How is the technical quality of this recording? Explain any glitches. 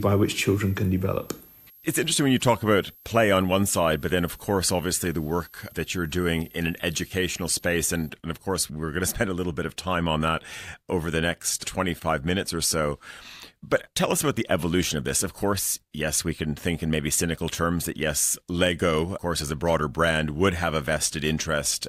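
A switching supply whistle mars the opening of this speech recording. From 0.0 to 8.09 s, a switching power supply in the chain ran in an audible burst mode or beat with another supply, leaking a thin whistle that wanders between about 12.3 and 13.0 kHz, roughly 25 dB below the signal, until just before "and of course we're".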